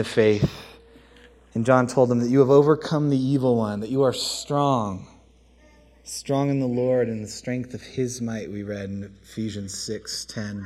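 The audio has channels drifting apart throughout, likely from two devices on separate clocks differing by roughly 50 ppm, so the inter-channel delay creeps to under a millisecond by the end. Summed to mono it flanges slowly, and a spectrogram shows comb notches sweeping downward across the spectrum.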